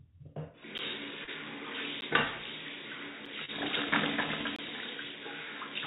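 Blocks of digital silence at 0.78, 2.01 and 3.26 s, and from 4.56 to 4.59 s, cut the sound out with no fade. The first two gap lengths fit unfilled 512-sample and, for the last, 1024-sample output buffers.

Short concealed packet losses from 1.24 to 1.29 s and 3.45 to 3.50 s sound instead like a brief smear, with the receiver extending the preceding sound across the missing packets. These have no hard edges and no silence, all heard through the call path's 4 kHz ceiling.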